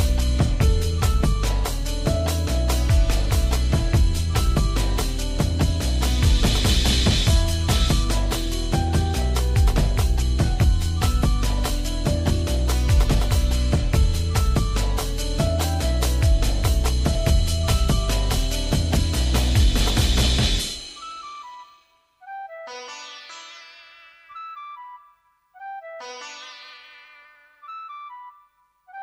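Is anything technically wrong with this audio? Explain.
Yes. There is a block of digital silence at 1.23 s. For about 0.67 ms, which fits a 32-sample block, the signal drops straight to silence and comes back with no fade. That points to the output buffer not being filled in time, or to a calculation giving invalid values that were zeroed. Because the hole is so short, it is heard not as a gap but as a tick or dip where the waveform jumps to silence and back.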